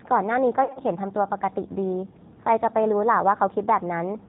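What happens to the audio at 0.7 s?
VoIP packet loss concealed by the speech codec hits from 0.64 to 0.81 s. About 90 ms of audio went missing in gaps scattered over 120 ms, which fits nine lost 10 ms frames, with the longest gap 50 ms. The decoder filled each gap by repeating its last pitch and vocal tract filter at falling gain, so the speech smears into a buzzy tone or coloured noise that fades, and stays weak or distorted for a moment after the packets return.

That span also carries the clip-wide G.729 codec damage, at 8 kbit/s (the G.729A variant). Only a filter, a pitch predictor and a few pulses per frame carry the speech, and nothing above 4 kHz passes. The result sounds dull, rough and synthetic, and the roughness is plainly audible.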